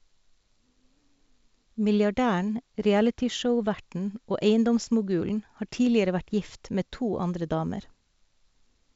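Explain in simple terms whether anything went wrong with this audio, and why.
Nothing went wrong here: the speech simply sounds like a good-quality phone call, because it was carried by G.722 wideband telephone coding, which keeps sound only up to about 7.7 kHz, so the missing very top end is just how that kind of line works rather than a fault.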